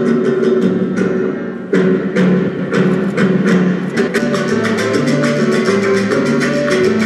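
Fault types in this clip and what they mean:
Frames out of order: two neighbouring blocks of frames got swapped in the stream and decoded in that wrong order, so a short stretch plays with its two halves exchanged and no time goes missing. Here it happens twice, from 2.48 to 2.69 s and from 3.97 to 4.19 s. Each swapped half is about 104.5 ms, which fits runs of four frames apiece, and it comes across as a brief garbled flutter.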